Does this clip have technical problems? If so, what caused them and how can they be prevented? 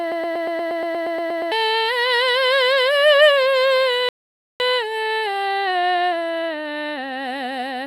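Yes. The music opens already caught in a broken-record loop: from 0.00 to 1.52 s a fragment of about 118 ms repeats exactly, back to back, twelve times. The likely cause is a player or stream that stalled and kept resending the last piece it held, so the music that belonged there is gone. On a waveform the segment tiles identically, and a spectrogram shows evenly spaced vertical seams about 118 ms apart. Keeping buffers fed, and muting rather than repeating on underrun, prevents it.

At 4.09 s the music stops dead in a playback stall, silent until 4.60 s, a gap of about 0.51 s. The likely cause is the player running out of data or its audio thread being blocked. The waveform drops to a flat line mid-phrase, and the spectrogram shows a clean vertical blank band across all frequencies. A larger playback buffer and a high-priority audio thread that is never made to wait on slow work prevent this.

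From 4.60 to 7.60 s, time-compressed catch-up follows as the player works off its backlog, running at 1.15 times normal speed. Small pieces are cut out and cross-faded, so the music sounds hurried at its normal pitch. The spectrogram keeps its harmonic spacing but the events crowd closer together. Avoiding the underlying stall prevents the need for catch-up.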